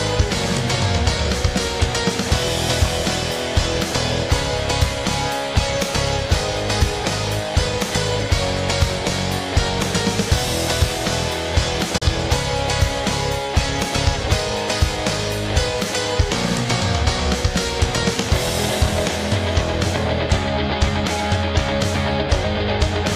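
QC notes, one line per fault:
11.98–12.02 s digital broadcast dropout: an 8 ms fade into roughly 32 ms of silence, consistent with one lost frame. Unlike a click or stutter, the sound goes clean and skips ahead without repeating.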